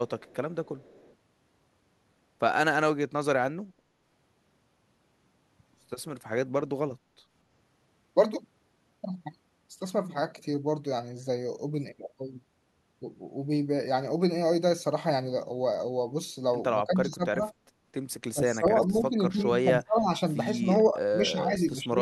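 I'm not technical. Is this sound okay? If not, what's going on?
No. There are two problems, both typical of a phone or video call where one side uses a loudspeaker.

Echo leak: From 0.08 to 1.15 s there is a faint second copy of the voice trailing about a quarter of a second (244 ms) behind the original, like a quiet echo in a hallway. This is likely because the other side's loudspeaker sound was picked up by their microphone and sent back, and their echo cancelling didn't fully remove it.

Speech suppressed in double talk: The voice briefly drops out or goes muffled at 6.64 to 6.72 s and 7.03 to 7.08 s. It then dips for longer stretches from 16.86 to 17.45 s, 18.31 to 20.14 s, and 20.61 s to the end. The early dips are short and deep, and the later ones are longer and milder. The likely cause is that both people talked at once. The echo-cancelling software couldn't tell the talker apart from the echo, so it turned both down.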